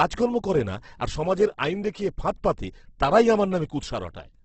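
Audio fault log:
throughout: Opus compression. The speech sounds rough and grainy, with noisy texture where fine detail should be and nothing above 8.2 kHz. The likely cause is heavy Opus coding in its music mode, which keeps band energies but fills starved bands with noise, consistent with roughly 12 kbps.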